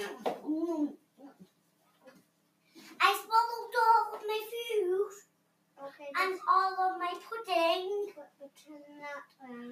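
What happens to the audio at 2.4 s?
The sound there is being cut by the noise suppressor. From 0.97 to 2.76 s it judges the sound as noise and pulls it down by up to about 12 dB, sinking sustained parts and clipping decays. This is part of a noise suppressor applied to music or sounds across the whole clip. A speech-tuned suppressor misreads steady content, so the level keeps swinging by roughly 5 dB and the sound pumps and thins.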